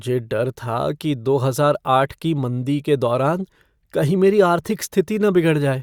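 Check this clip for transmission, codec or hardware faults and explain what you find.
I find no faults to report in this clip.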